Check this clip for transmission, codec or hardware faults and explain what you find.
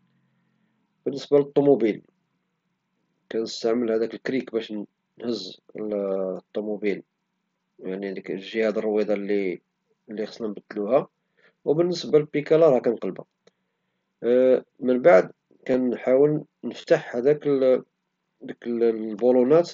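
One transmission fault turns up: concealed Bluetooth headset packet loss, heard as four brief glitches in the speech, which passes through the mSBC headset codec.

At 4.04 s a single lost frame is nearly hidden; at 12.08, 15.72 and 16.81 to 16.84 s, the speech briefly turns buzzy, with a faint warble as it resumes. Gaps of 7.5, 15, 15 and 22.5 ms were filled by repeating recent waveform.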